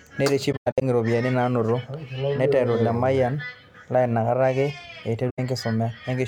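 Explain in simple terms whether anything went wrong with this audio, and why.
The speech drops out briefly at 0.52–0.83 s and 5.29–5.39 s. This is AAC frame loss with muting: missing chunks were replaced with silence, fading softly out and back in.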